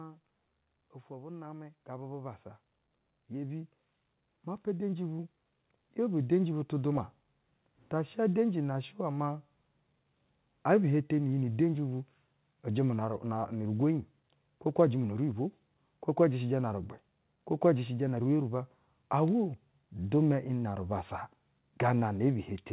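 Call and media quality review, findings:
Automatic gain rising, 1.07 to 9.45 s. Speech and background noise swell together, about 17 dB in total. Probable component: the AGC stage. It read the input as too quiet and raised gain slowly over roughly eight seconds, with no sudden step. Nothing above 4 kHz throughout, which fits G.711 A-law at 64 kbps on the call path.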